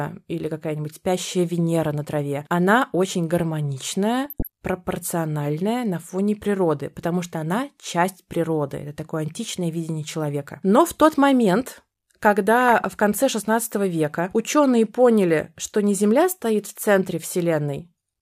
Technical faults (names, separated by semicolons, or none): DAB burbling